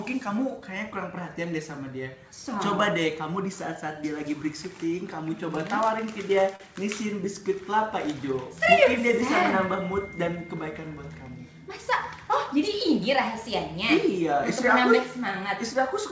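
Short concealed packet loss at 6.56 to 6.61 s: 40 ms arrived too late, so the receiver extended the preceding sound, leaving a brief smear.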